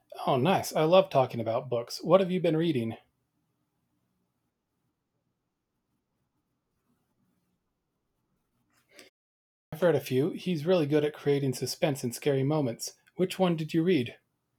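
At 9.43 s, after a 0.42 s pause, a clipped start after a pause occurs. The output path had gone idle and took about 0.29 s to wake, so "read a few" enters abruptly without its first sounds. The waveform jumps from flat silence to full level at 9.72 s, and the spectrogram shows no onset energy before it.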